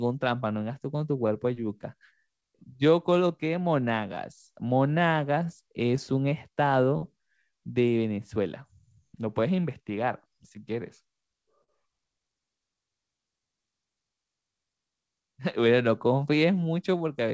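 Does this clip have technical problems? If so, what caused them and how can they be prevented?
Yes. The sender's clock runs slow relative to the receiver, by about 3 percent, so this is clock drift between sender and receiver. It shows as small timing hiccups recurring at uneven intervals across the whole speech clip. Locking both ends to a common clock, or resampling adaptively at the receiver, prevents it.

Repeated timing corrections run from 0.06 s to 16.98 s. The receiver keeps stretching the sound, slowing it to about 98 percent speed and adding roughly 0.3 s overall. The edits are always lengthening and unevenly spaced, which separates them from random loss. A drift-aware jitter buffer that corrects gradually prevents this.

Scattered short gaps occur between 2.41 s and 7.03 s (about seven, the longest near 15 ms) and between 8.35 s and 10.52 s (about four, around 10 ms each). Each was patched by continuing the last sound, so nothing is missing. 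Unlike the drift corrections, these come from individual lost or late packets. Forward error correction or a steadier network route prevents them.

A short stall from a late packet runs from 11.64 s to 11.70 s. The jitter buffer emptied, and the receiver held the last sound for 38 ms, then resumed exactly where it left off. That single held moment differs from the scattered gaps. A slightly deeper jitter buffer prevents it.

Nothing above 8 kHz comes through, which fits the G.722 call codec on this path.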